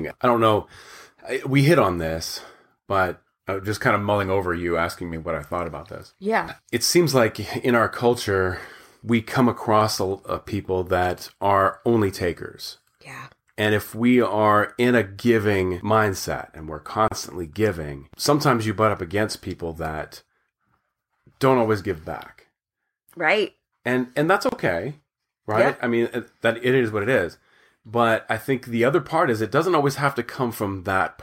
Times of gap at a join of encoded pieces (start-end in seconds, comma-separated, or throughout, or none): 17.08-17.11, 24.49-24.52